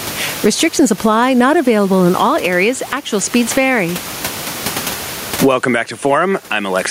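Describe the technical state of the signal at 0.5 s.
Gain pumping covers the whole clip, including 0.5 s. The gain swings about 20 dB, squashing loud and soft parts closer in level, likely from excessive gain feeding a fast limiter.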